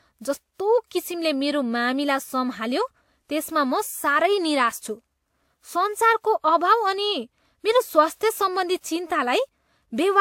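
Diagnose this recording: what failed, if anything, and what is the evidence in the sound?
Transcoding between lossy codecs runs through the whole clip, a codec-stage fault. The speech has nothing above 16.6 kHz, and two distinct kinds of coding artefact sit on top of each other rather than one consistent texture. That layering fits a likely chain of an older WMA encode at about 96 kbit/s followed by a Vorbis re-encode near 59 kbit/s. The second encoder wastes bits reproducing the first one's damage, and the cut-off stays fixed at its lowest point in the chain.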